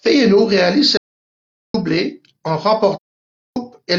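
At 0.97 s the speech just stops dead and stays gone until 1.74 s, roughly three quarters of a second of pure silence. That's an audio dropout to silence. There's no room tone or hiss in the gap, just silence, so whatever was said in there is lost. The likely culprit is the input going away for a moment, a loose connection, a link hiccup or a brief mute, while the recorder kept writing.

Then from 2.96 s to 3.57 s there's a second hole, about 0.6 s long, but it sounds different. The level eases down and back up rather than cutting. That's AAC frame loss with muting. The decoder zeroed the missing frames, and the overlapping windows smooth the fade out and back in. The length fits a run of around fourteen consecutive AAC frames going missing.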